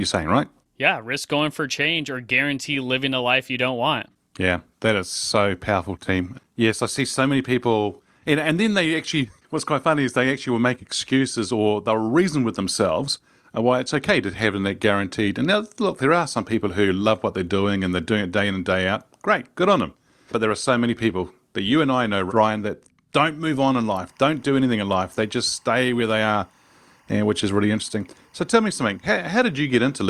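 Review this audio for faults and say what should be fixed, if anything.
Timecode bleed runs from 24.08 s to the end at 30.09 s. Linear timecode from an adjacent track or cable leaks into the speech path. Its square wave flips between two pitches near 1 and 2 kHz, so a thin chirping warble sits behind the voice, somewhere around 40 dB below it. The chirp pattern repeats with the code's frame rate of 23.976 frames per second. Prevent it by routing timecode on a separate, shielded cable away from audio lines and keeping the timecode track isolated from programme channels.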